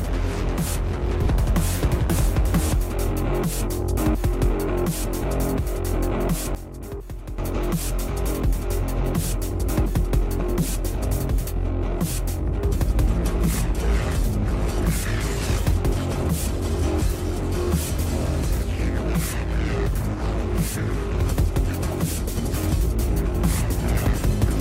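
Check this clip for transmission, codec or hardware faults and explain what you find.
Two faults are present, at about 1.2 s and 6.5 s.

Frames out of order, 1.22 to 1.29 s: two adjacent blocks of roughly 23.2 ms arrived swapped and were decoded in that order. The result is a brief garbled flutter, and no time is lost.

Sudden gain jump, 6.55 to 7.38 s: the sound and background noise drop together by about 12 dB, then return. This is likely an unramped digital gain change.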